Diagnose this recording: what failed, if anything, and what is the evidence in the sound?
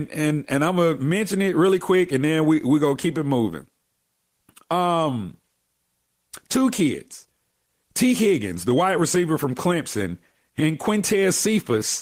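Clock drift between sender and receiver runs through the whole recording, a network and jitter-buffer fault. The sender's clock runs roughly 3 percent slow, so the receiver's buffer keeps draining and the speech arrives slightly behind the pace the playback side expects.

Repeated timing corrections run from 0.22 to 11.72 s as small, unevenly spaced edits, with speech running at 97 percent speed. The receiver keeps repeating short pieces to cover the shortfall, adding roughly 0.4 s in total.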